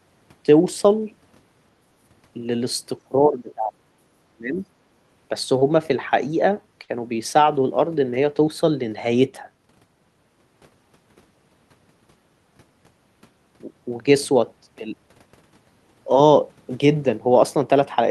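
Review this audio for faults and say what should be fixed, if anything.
The speech dips sharply at 3.04–3.82 s, by about 25 dB, and again at 4.31–4.65 s, by about 30 dB. The likely cause is speech suppressed in double talk: the echo canceller mistook overlapping far-end sound for echo and attenuated both. Unlike a dropout, the level sags rather than vanishing cleanly. Better double-talk detection, with gentler suppression, would prevent it.

Short stalls from a late packet occur at 5.59–5.72 s and 6.83–6.96 s. The jitter buffer ran dry, and the last sound was held for 23 ms and then 55 ms before playback resumed. Nothing is skipped, unlike loss concealment, but the sound drags briefly. A deeper adaptive jitter buffer would absorb this.

At 12.85–12.87 s, chunks are out of order. A 10 ms chunk plays one chunk late, swapping places with its neighbour, which creates three hard joins heard as a jumbled moment. 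No audio is missing, unlike a gap. Ordering packets by sequence number before playback or writing would fix it.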